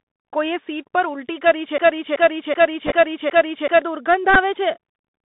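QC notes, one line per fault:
throughout – Bluetooth CVSD headset codec: the link carries the sound as a one-bit up/down delta stream whose step size adapts, which fits a 64 kbps CVSD headset path. The band runs from about 150 Hz to 3.7 kHz, with scratchy sibilants, overload on loud bright sounds, and a granular hiss beneath the speech.
1.78–3.82 s – broken-record loop: the stream most likely stalled and kept resending its last held fragment, so a 0.38 s slice of speech plays five times back to back. The audio that belonged in those two seconds is gone.
2.87–2.91 s and 4.34 s – Bluetooth headset packet repeated: lost voice packets were replaced by decoding the previous packet's bits again. The first spot covers about 19 ms spread over roughly 38 ms, with runs of a few milliseconds, giving a brief rough buzz. The second, about 11 ms, is a brief buzz.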